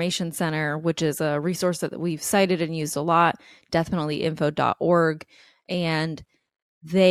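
The speech recording carries no audible technical faults at any point. There is nothing in its timeline that a listener would need to flag.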